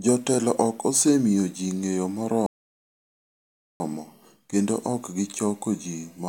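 At 2.46 s the speech drops abruptly into silence and stays silent until 3.80 s, then picks up again at exactly the point where it broke off, with nothing skipped or repeated. This is a rebuffering stall: playback consumed all the audio it had downloaded and paused until more data arrived. No content is lost, but about 1.34 s of dead air is inserted into the middle of the clip.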